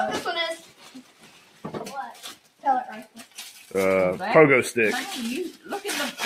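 A noise suppressor meant for speech is running over this non-speech audio and treats its steady content as noise. Across the whole clip the level swings by around 10 dB as the suppressor clamps down and lets go, so sustained parts pump and thin out while sharp onsets pass largely intact. On a waveform the envelope looks ragged and dips between transients. A spectrogram shows held energy and tails fading early instead of decaying smoothly. The sound is cut by the noise suppressor most heavily in three stretches: 0.57 to 1.65 s, about a second, with drops of about 11 dB; 2.13 to 2.64 s, about half a second, again about 11 dB down; and 3.04 to 3.74 s, about 10 dB down. In each, steady or decaying material sinks noticeably below its surroundings. The waveform shows clear troughs there, and the spectrogram shows darker bands where continuous content is thinned or truncated, with only brief attacks remaining bright.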